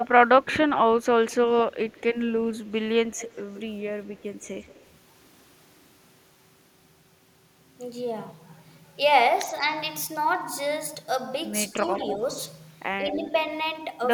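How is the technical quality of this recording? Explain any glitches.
The recording has two recurring call-path faults, both likely traceable to a loudspeaker-side echo canceller.

Echo leak appears from 0.0 to 3.61 s, 4.15 to 4.86 s, 11.86 to 12.13 s and 13.08 to 13.44 s. A delayed copy of the speech trails the original by 181 to 192 ms, roughly 15 to 30 dB down. On a spectrogram it looks like ghosted harmonic patterns shifted right, and the waveform has low-level smearing after each burst.

Speech suppressed in double talk occurs at 11.79 to 12.22 s and 12.98 to 13.23 s, where both sides overlap. The canceller turns the talker down as well as the echo. Each dip is about 5 dB deep and lasts around 200 ms. The waveform envelope narrows briefly, and the spectrogram shows a short fade.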